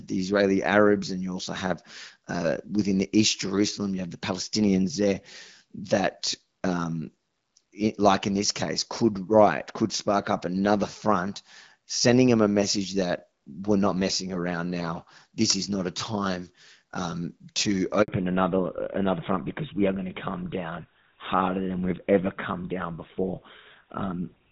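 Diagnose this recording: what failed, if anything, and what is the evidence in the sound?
Handover gap at 18.02 s, lasting 60 ms until 18.08 s, immediately after "a time um to". This is a network-stage fault. The call was passed from one network to another, and no speech frames were delivered while the switch took place. The sound falls away almost at once and stays silent for those 60 ms until the new link starts carrying audio. Anything spoken inside that window is lost.

Fallback to narrowband from 18.08 s to the end of the recording, also heard right after "a time um to". This is a codec-stage fault. Before the gap, the speech has the wider, airy top end of HD Voice, with only light coding damage, which fits AMR-WB at around 12.65 kbit/s. After the gap, nothing above 4 kHz remains, and the speech turns duller and rougher. That points to the call being renegotiated onto an older narrowband codec such as GSM full rate.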